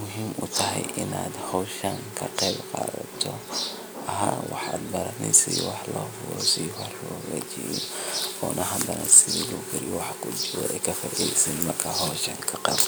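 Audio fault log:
No audible faults anywhere in this speech recording.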